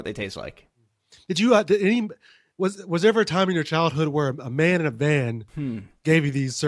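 No technical faults can be heard anywhere in the speech recording; the signal stays continuous throughout.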